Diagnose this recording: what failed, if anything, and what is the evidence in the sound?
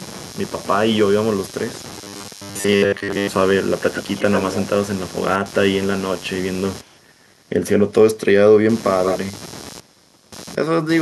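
Computer activity noise sits under the whole clip, from start to finish. It's a buzzy, pulsing layer repeating about a hundred times a second and sitting roughly 20 dB below the speech. It comes from the analogue wiring. Load changes in the machine are disturbing the shared ground the audio circuit references, and that pulsing rides straight into the signal. It tracks the computer's activity, not the talking.

Between 1.90 and 3.28 s the speech turns into a rigid, metallic robotic sound from repeated short buffers. There's a fixed 100 Hz buzz imposed on it. That pitch points to 10 ms chunks being replayed. Audio isn't arriving at the driver or buffer stage in time, so the software keeps looping the last slice. Most of that stretch is repeats, and the real audio underneath is skipped. That starvation is the likely cause.

Echo leak shows up four times, as a delayed copy of the voice. At 3.94–4.64 s (102 ms delay) and 9.03–9.18 s (159 ms) it's strong, nearly as loud as the speech itself. 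At 2.34–2.41 s (143 ms) and 6.81–7.01 s (102 ms) it's faint, down around 35 dB. This is call processing. Most likely the far end is on a loudspeaker and its echo canceller isn't fully removing what its mic picks up, so that leftover is being sent back.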